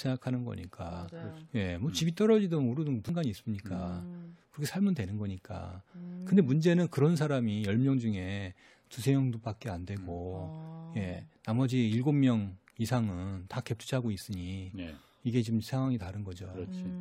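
A speech recording with a CD skip at 3.09 s. The player mutes for only a couple of milliseconds, heard as a small tick, and playback then resumes from a different point on the disc's spiral, because a knock or surface flaw made the laser jump tracks. What separates it from a plain click or a brief dropout is that the audio does not pick up where it left off. The speech continues with a discontinuity rather than merely a gap.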